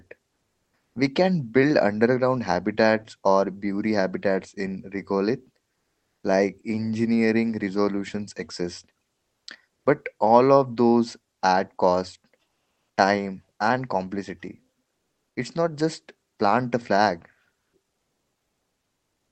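In this speech clip, the pauses at 0.33 to 0.95 s, 9.77 to 9.85 s, 12.49 to 12.97 s (between "of those add cost" and "time and complexity") and 17.59 to 17.73 s (after "just plant a flag") lose their natural room detail. They become a flat, featureless hiss that shifts by about 1 to 4 dB. This is comfort noise in place of the background, likely from Opus discontinuous transmission synthesising filler while the sender paused.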